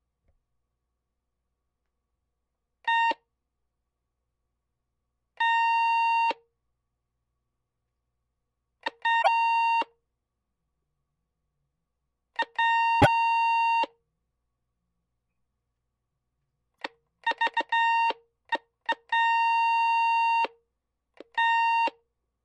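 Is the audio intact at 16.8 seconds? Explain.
No. Between 16.73 and 16.81 s there is damaged data in the compressed stream. For about 74 ms, part of the encoded data is corrupted, so the decoder misreads or rejects those frames, loses its place in the stream and scans ahead for the next valid frame header before it can decode normally again. That gap comes out as a brief chirp or blip, a short burst of garbled sound cutting across the audio.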